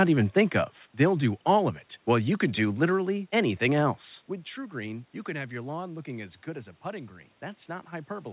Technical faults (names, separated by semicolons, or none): none